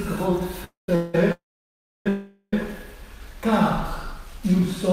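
Call audio freezes at 0.64–0.89, 0.95–1.15, 1.32–2.07 and 2.09–2.54 s: the last sound is extended as a fading buzz or hiss, then silence of about 140 ms in the first and 650 ms in the third. The likely cause is delayed packets emptying the jitter buffer. The audio then resumes where it stopped, with nothing lost.

A jitter buffer slow-down runs from 4.08 to 4.62 s. Repeated pitch periods or bits of pauses add 36 ms, so the audio plays at 94% speed without any change in pitch.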